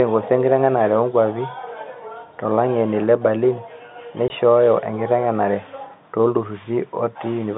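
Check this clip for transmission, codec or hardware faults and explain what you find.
One transmission fault is audible, a single dropout in the speech. From 4.28 to 4.30 s there is packet loss filled with silence. One 20 ms packet never arrived, so the receiver played nothing. The sound stops abruptly, with hard edges. The telephone-band G.711 coding comes through at its usual 150 Hz to 3.7 kHz width.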